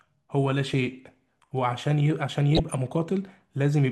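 From 2.55 to 2.74 s, DAB burbling: weak reception lets bit errors slip past error correction, so short blips of noise appear in single sub-bands across 10 frames at roughly a 0.3% bit error rate.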